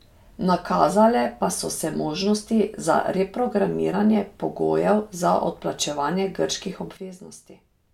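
At 6.97 s, after "pogojev za odplačevanje grških", a sudden gain jump drops speech and background noise together by about 12 dB, likely an unramped digital gain change.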